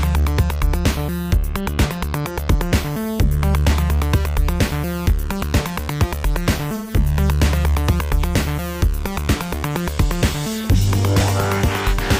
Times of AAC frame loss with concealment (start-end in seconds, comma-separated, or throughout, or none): 6.75-6.95